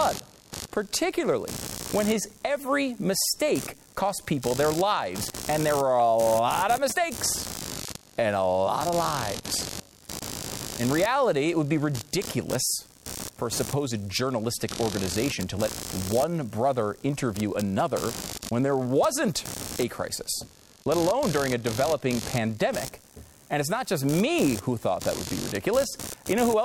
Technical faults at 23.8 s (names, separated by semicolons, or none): computer activity noise